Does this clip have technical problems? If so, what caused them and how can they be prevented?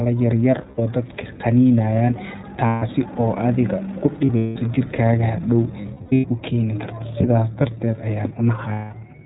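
Yes. The iLBC codec runs throughout: everything above 4 kHz is gone and the speech sounds plainly rough and synthetic, which fits iLBC's 13.33 kbps mode with 30 ms frames. Using a wideband codec such as Opus instead would prevent this.

Lost iLBC frames cause held, buzzy vowel-like fills at 0.71–0.79 s, 2.67–2.83 s, 4.26–4.57 s, 5.82–6.25 s and 8.73–8.92 s. In each, the decoder repeats the last pitch cycle mixed with noise until good frames return. The two middle losses are scattered rather than continuous, the longest unbroken stretch around 200 ms. Preventing them means reducing packet loss on the network, for example with a larger jitter buffer or forward error correction.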